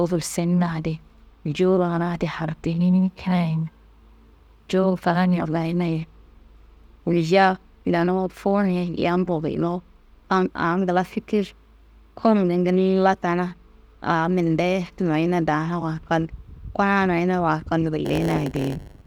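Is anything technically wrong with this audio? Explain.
Yes. From 18.04 s to the end, a block size mismatch (padded) pads each block with zeros, causing a 100 Hz buzz and speech slowed to about 0.92 speed with its timbre kept.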